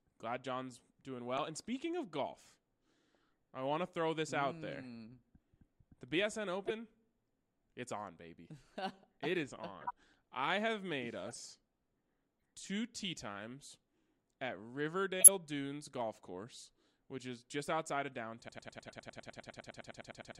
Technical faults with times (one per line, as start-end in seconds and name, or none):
1.37 corrupt frame decoded
6.66-6.71 corrupt frame decoded
9.81-9.92 corrupt frame decoded
11.26-11.36 corrupt frame decoded
12.39-12.42 corrupt frame decoded
15.20-15.28 corrupt frame decoded
18.49-20.40 broken-record loop
18.87-18.92 corrupt frame decoded